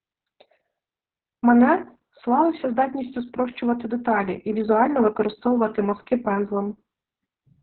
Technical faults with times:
0.00-7.62 Opus voice compression

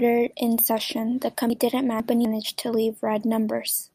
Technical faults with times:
1.50-2.25 chunks out of order

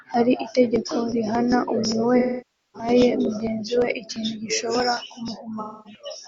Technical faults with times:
2.19-2.89 AAC frame loss with concealment
5.60-6.02 AAC frame loss with concealment

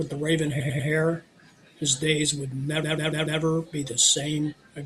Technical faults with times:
0.59-0.88 repeated frames
2.82-3.40 repeated frames

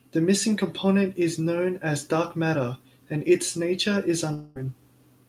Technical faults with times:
4.33-4.57 long network dropout

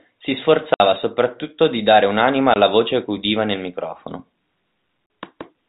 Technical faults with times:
0.74-0.80 packet loss filled with silence
2.54-2.56 packet loss filled with silence
5.06-5.10 packet loss filled with silence

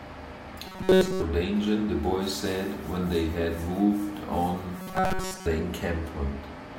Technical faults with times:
0.67-1.22 robotic sound from repeated short buffers
4.77-5.46 robotic sound from repeated short buffers

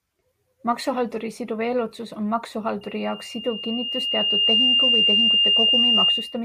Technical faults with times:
2.81-6.44 loudspeaker feedback squeal

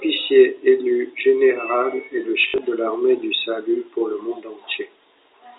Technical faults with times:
2.42-2.58 packet loss with last packet repeated

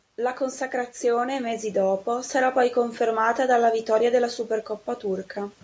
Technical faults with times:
0.16-3.32 automatic gain rising

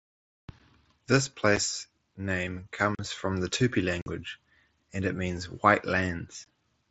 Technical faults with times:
1.56 unconcealed Bluetooth headset packet loss
2.95-2.99 unconcealed Bluetooth headset packet loss
4.02-4.06 unconcealed Bluetooth headset packet loss
6.46 unconcealed Bluetooth headset packet loss

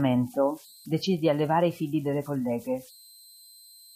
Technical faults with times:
0.00-3.95 converter idle tones

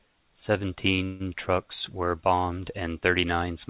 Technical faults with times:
1.04-1.25 call audio freeze

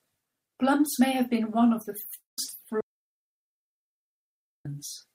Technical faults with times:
2.14-2.39 long network dropout
2.81-4.65 audio dropout to silence

